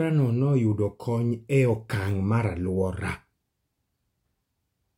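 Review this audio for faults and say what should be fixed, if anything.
No faults turn up in this speech recording, so there is nothing that needs to be fixed.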